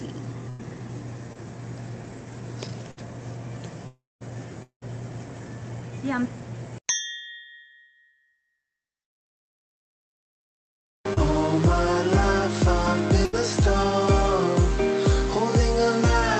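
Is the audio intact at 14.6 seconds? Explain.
Yes, at 14.6 seconds the audio is intact, with no dropout, glitch or other fault there.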